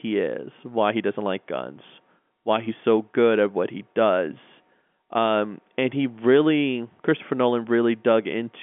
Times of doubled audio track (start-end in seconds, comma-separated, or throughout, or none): none